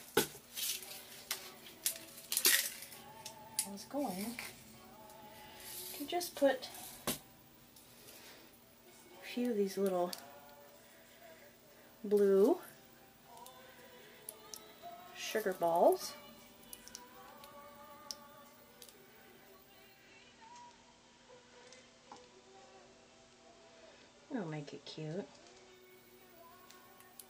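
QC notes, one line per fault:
19.84–25.97 s, digital radio blending to analogue: the receiver lost its digital stream and cross-faded over roughly 284 ms to the FM broadcast of the same station, then blended back at 25.97 s. While on FM, the level drops by about 1 dB, and a layer of hiss appears about 25 dB below the programme, all lifting away once the digital signal returns.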